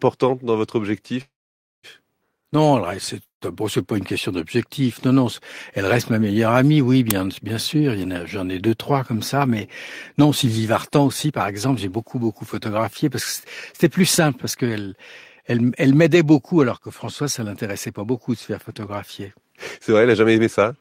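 At 1.21–1.86 s and 3.23–3.44 s, a call audio freeze, likely from delayed packets draining the jitter buffer, extends the last sound as a fading buzz, then silence of 0.52 s and 0.11 s. On a spectrogram this is a smeared band fading to blank.

At 7.11 s, an uninitialised buffer plays a 5 ms burst of loud digital noise, fitting a 256-sample block. It appears as a sharp waveform spike.

A jitter buffer speed-up runs at 9.36–10.26 s (105%), 11.05–12.18 s (107%) and 13.04–20.77 s (107%). Trimmed pitch periods hurry the speech without raising pitch, so harmonic spacing holds while syllables compress.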